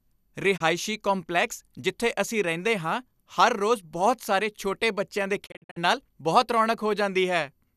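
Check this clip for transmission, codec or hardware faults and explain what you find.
Two digital broadcast dropouts interrupt this speech. At 0.56 to 0.62 s, the receiver lost one frame, about 24 ms of audio, and muted with a 20 ms fade. At 5.45 to 5.78 s, right after "ਛੋਟੇ ਬੱਚਿਆਂ ਦੇ", several short holes, none longer than 48 ms, are scattered over about 0.29 s. That fits about eight lost 24 ms frames. Unlike concealed packet loss, these gaps go silent rather than being filled, and the lost audio never returns.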